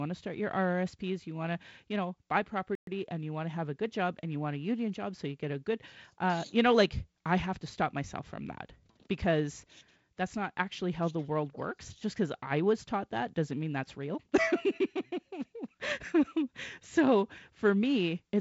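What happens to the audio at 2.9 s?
A playback stall silences the speech from 2.75 to 2.87 s, 120 ms, likely because the player ran dry of data; the waveform shows a flat gap, the spectrogram a blank column.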